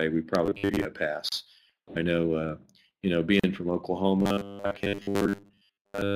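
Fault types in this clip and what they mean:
Robotic sound from repeated short buffers: from 0.46 to 0.85 s and from 4.20 to 6.15 s the sound becomes a rigid, metallic 100 Hz buzz, likely from a roughly 10 ms buffer replayed in place of most new audio. Unlike codec warble, its rate never moves.
Gap at a join of encoded pieces: continuous sound breaks for about 33 ms at 1.29 s and about 39 ms at 3.40 s, then carries on exactly where it stopped, because silent start delay and end padding were left in. Unlike a dropout, nothing is skipped.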